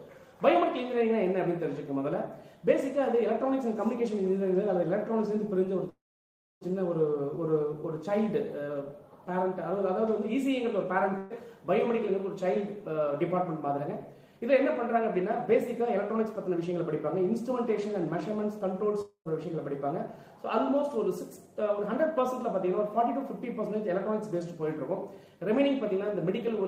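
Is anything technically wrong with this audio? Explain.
Yes. There are four kinds of fault, all typical of audio carried over a network.

Call audio freeze, from 5.89 to 6.64 s. The sound stops and a fading tail replaces it. Then about 0.62 s of silence follows. The gap lasts about 0.72 s in total. The cause is likely late packets draining the jitter buffer. The receiver stretched out the last sound while it waited. When playback resumes, it picks up exactly where it stopped. Nothing is lost, but everything after runs about 0.72 s later.

Burst of packet loss, from 11.18 to 11.33 s. A run of packets arrived too late or never arrived. About 120 ms of audio is gone. The receiver filled the hole by repeating the last sound and turning it down. You hear a brief held buzz or hiss that fades. The sound then continues from a later point, with a small jump.

Jitter buffer speed-up, three stretches. 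The first runs from 12.45 to 14.52 s at 106% speed. It removes about 0.15 s. The second runs from 16.25 to 16.78 s at 107%. The third runs from 20.70 to 21.55 s at 107%. The buffer had built up too much delay. The receiver cut tiny pitch-period slices again and again. The pitch stays the same, but these passages sound slightly rushed.

Long network dropout, from 19.01 to 19.28 s. About 240 ms of audio never plays. The last sound trails off as a fading buzz or hiss. About 70 ms of silence follows. The audio then returns further on, with that section missing. Incoming audio most likely stopped altogether for that stretch.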